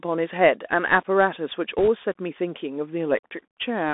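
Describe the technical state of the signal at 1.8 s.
Around 1.8 s there's a burst of bit errors on a Bluetooth voice link, from about 1.78 to 1.88 s. Flipped bits, maybe a percent or two, smear into a rushing crackle rather than sharp clicks. Underneath, the Bluetooth CVSD headset codec runs throughout. Its one-bit up-down coding with an adaptive step limits the band to roughly 250 Hz to 3.6 kHz and adds a clearly audible granular, scratchy edge.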